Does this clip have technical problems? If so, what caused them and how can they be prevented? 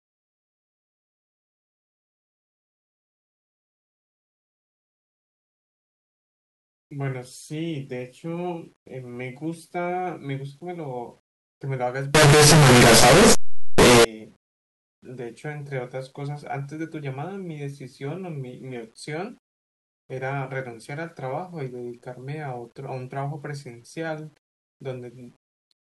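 Yes. From 12.15 to 14.05 s the speech turns into very loud, harsh distortion, and quiet stretches come out as loud as everything else. On a waveform the trace jumps across the whole range at every zero crossing. A spectrogram shows dense broadband energy right up the frequency axis for that span. The likely cause is a signed and unsigned mix-up on the 8-bit samples, which flips the top bit of each one. This can be prevented by declaring and checking the sample format explicitly wherever the audio is written, read or converted.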